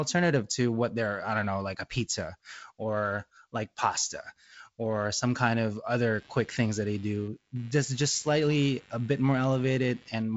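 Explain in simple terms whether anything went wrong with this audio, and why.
Right after the words "or some kind of", at 6.14 s, computer activity noise starts and runs to the end of the clip. It is a buzzy pulsing about a hundred times a second, picked up from the computer's circuitry. It tracks the machine's workload rather than the speech, which sets it apart from a steady mains hum.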